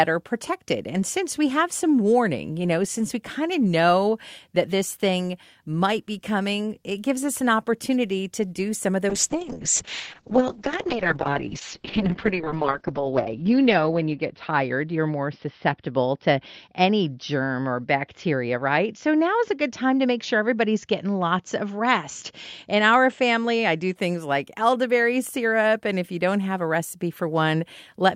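Right after "to do some of" at 9.1 s, a call bitrate drop squeezes the encoder from 64 to 6 kbps and cuts bandwidth from 20 to 6 kHz. It sounds muffled and watery until "like elderberry syrup" at 24.0 s.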